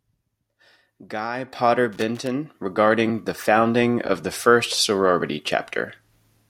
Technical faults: microphone volume stepped up; loose connector crackle

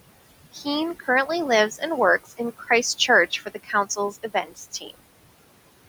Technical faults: noise suppressor artifacts; speech cut by the noise suppressor

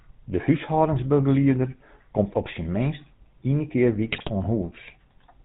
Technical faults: channel delay (comb filtering); GSM full-rate codec; GSM bit errors

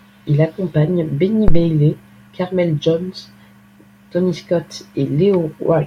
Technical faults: phantom power thump

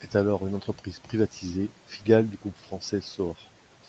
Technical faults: none

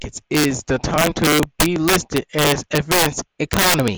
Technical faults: integer overflow

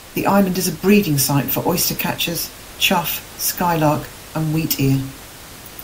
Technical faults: none

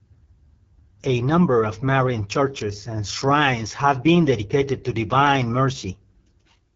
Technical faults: AMR wideband (HD Voice) codec

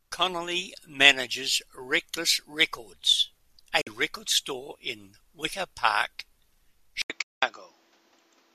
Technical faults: digital broadcast dropout; input switched to a poorer device

